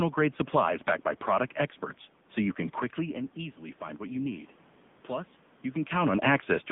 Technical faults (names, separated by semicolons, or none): AMR narrowband mobile codec